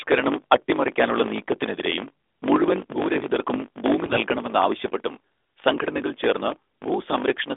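Speech sent over an AMR-NB narrowband mobile link at 12.2 kbps, with a phone band of about 300 Hz to 3.6 kHz and only light codec coloration, suffers from a block size mismatch (truncated) from start to finish. One stage writes longer blocks than the next one reads, which fits a writer using 1024-sample blocks, so the tail of every block is dropped. The result is a steady 50 Hz buzz, and the speech runs 1.07 times fast at roughly its normal pitch. On a spectrogram this shows as vertical seams every 20 ms. In the waveform, small discontinuities appear at the same spacing. From 4.06 to 4.19 s, right after "നീക്കത്തിനെതിരെയും മുഴുവൻ ഭൂരഹിതർക്കും ഭൂമി", AMR bit errors hit at a rate of about five percent. The span fits roughly six 20 ms frames. Flipped low-priority bits misplace the excitation pulses and upset the fine gain and spectral values, so the voice turns hoarse and gargly while keeping about its pitch and level. 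On a spectrogram the harmonics smear into noisy, broken texture below 3.6 kHz for that short stretch.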